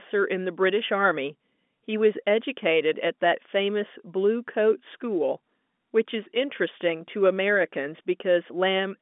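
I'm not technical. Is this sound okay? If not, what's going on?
Yes, nothing in this speech recording has gone wrong. It has the narrow, slightly boxy sound of an ordinary landline call, because G.711 telephone coding keeps only the range between roughly 200 Hz and 3.5 kHz and drops the brighter upper sounds above about 3.7 kHz.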